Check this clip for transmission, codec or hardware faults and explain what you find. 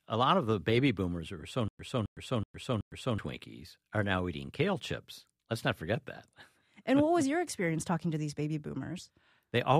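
There's one fault here: a stutter with silent gaps. From 1.68 to 3.18 s, just after "boomers who are so", a 266 ms burst repeats four times, each followed by 110 ms of digital silence, every 375 ms. It's likely a stalled stream replaying its last fragment at each retry, then running empty, so that stretch of speech is lost.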